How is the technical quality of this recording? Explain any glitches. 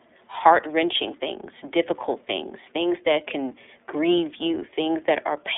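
The technical quality is limited. The speech runs through the iLBC codec for its whole length, and the damage is plainly audible. The codec works on 30 ms frames and codes each one's excitation on its own, so the speech sounds slightly rough and synthetic. The band is narrow, roughly 300 Hz to 3.6 kHz, with nothing above 3.8 kHz. Sibilants lose their edge, and the voice sounds thin. This fits the 13.33 kbps mode.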